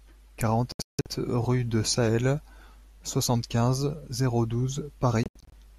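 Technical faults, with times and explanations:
0.72 to 1.06 s and 5.23 to 5.53 s, digital broadcast dropout: the speech mutes in clusters of short holes as the receiver discards frames that fail their checks, which fits frames of about 24 ms. The first episode silences 288 ms in total, with its longest gap 168 ms. The second silences 168 ms, with its longest gap 72 ms. The waveform drops to near silence, and the spectrogram shows vertical blank bands across all frequencies.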